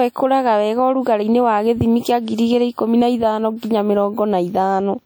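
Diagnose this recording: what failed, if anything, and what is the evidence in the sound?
The codec stage failed. The damage runs the whole length of the speech and is plainly audible. Sounds ring and smear around their onsets, with a washy, breathing hiss that rises and falls with the signal. This is likely WMA compression. Its long transform blocks spread quantisation noise across tens of milliseconds, and weak spectral lines get zeroed. The degree of damage fits a bitrate around 48 kbps. The top end still reaches about 20.1 kHz, so the harm is smearing, not band-limiting.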